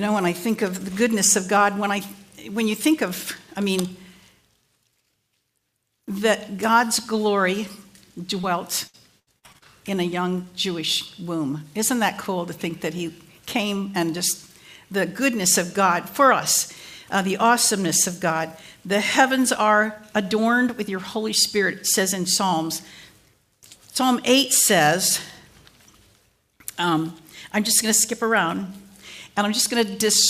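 At 8.41 to 8.45 s, about 20 ms of the stream arrived too late to decode, a short concealed packet loss; the receiver patched it by extending the preceding sound, leaving a brief smear in the audio. From 8.87 to 9.63 s, repeated packet loss left five separate holes, the longest 73 ms, with roughly 29% of that stretch filled in, so the sound turns choppy and robotic, with fragments missing.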